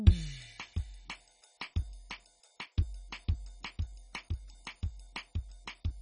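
A music clip that was likely squeezed through MP2 compression at a very low bitrate, one consistent with about 32 kbps, so upper sub-bands are dropped and the rest coarsely quantised. Throughout, nothing survives above about 10.3 kHz, leaving it dull, gurgling and granular.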